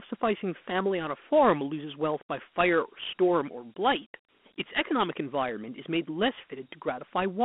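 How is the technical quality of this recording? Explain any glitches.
The recording is limited by a single fault present for its whole length: Dialogic VOX ADPCM coding. The speech sits in a narrow line band of about 200 Hz to 3.4 kHz with nothing above 3.8 kHz, so it sounds thin and telephone-like. The 4-bit adaptive quantiser encodes only the difference from a predicted sample, and its coarse steps leave a plainly audible gritty hiss that rides on the speech. This fits 32 kbps OKI ADPCM at 8,000 samples a second.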